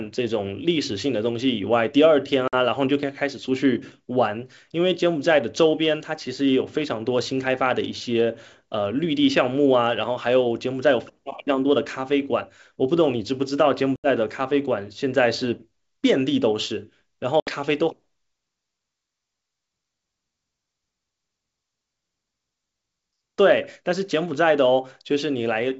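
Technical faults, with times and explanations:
2.48–2.54 s, 13.96–14.07 s and 17.40–17.50 s: packet loss on an ADPCM call. Hard-edged silent gaps of about 50, 80 and 70 ms, each consistent with several lost packets, break into the speech. The receiving G.722 decoder's adaptive predictor and step size drift from the sender's, so the speech returns with brief slight distortion before settling.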